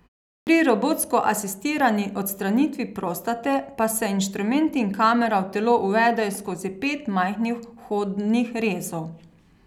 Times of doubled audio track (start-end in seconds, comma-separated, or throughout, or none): none